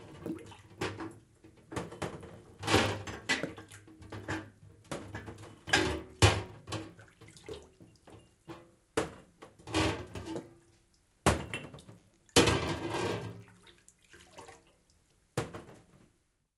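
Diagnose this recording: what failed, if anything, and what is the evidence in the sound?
The sample-rate conversion stage failed: the resampler restarted on every block. For the whole clip, a faint buzz at 50 Hz rides on the sound and falls silent in the gaps, which fits 20 ms blocks, most likely from a 24 kHz to 48 kHz conversion. With no history at each boundary, the interpolator makes a small error every 20 ms. On a spectrogram this shows as evenly spaced vertical lines, 50 per second, visible only under signal. The waveform has tiny kinks at each block edge.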